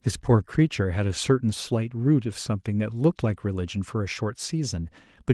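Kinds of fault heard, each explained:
No faults are audible in this speech clip.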